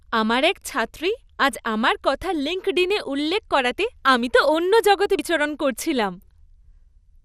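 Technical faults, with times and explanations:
Throughout, MP2 compression: the speech sounds dull, with nothing above about 14.3 kHz, and carries a plainly audible gurgling, granular roughness. This likely comes from MPEG Layer II coding at a low rate, consistent with around 80 kbps. That format divides the spectrum into 32 equal sub-bands and shares out a limited bit budget. Starved upper bands get switched off, cutting the top end. The remaining bands are quantised coarsely and flicker in and out, which produces the gurgle.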